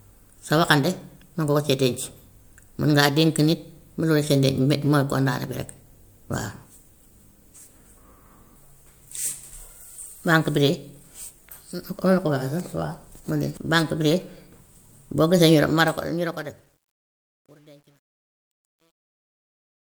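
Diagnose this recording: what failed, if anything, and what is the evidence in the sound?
The closing fade-out of the speech, which starts around 15.6 s and runs to the end of the clip at 19.9 s, turns gritty from 15.64 s, and from 16.51 s to the end the grit is at its worst instead of thinning smoothly. That is truncation distortion on a fade, from the gain or sample-format stage. As the fade lowered the level without dither, the quiet waveform collapsed onto a few coarse square steps, which fits a word length cut to about 10 bits.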